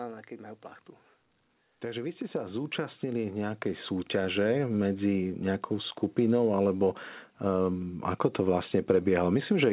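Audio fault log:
1.65–6.02 s, automatic gain rising: the gain control judged the input too quiet and raised level gradually by about 13 dB, so speech and background swell together.
throughout, WebRTC call path: narrowband call coding leaves nothing above 4 kHz, consistent with G.711 A-law at 64 kbps, giving a telephone-band sound.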